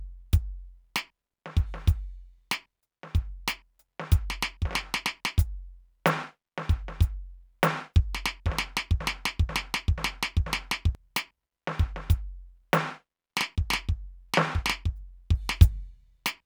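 At 9.0 s the music falls into a broken-record loop: a fragment of about 0.49 s plays four times back to back until 10.95 s. The likely cause is a stalled player or stream resending its last buffered piece, so the intended music for that span is lost.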